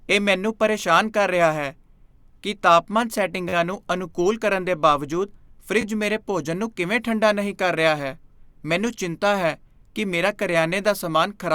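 Repeated buffer at 3.49 to 3.53 s, between "ਕੀ ਤਾਪਮਾਨ" and "ਨੂੰ ਅਨੁਕੂਲ ਕਰਨ ਦੇ", and again at 5.81 to 5.84 s, after "ਅਨੁਕੂਲ ਕਰਨ ਦੇ ਬਾਵਜੂਦ". Fresh audio arrived late, so the last piece of about 11 ms, which fits a 512-sample buffer, replayed four extra times, then twice. Hard joins make each a brief buzz.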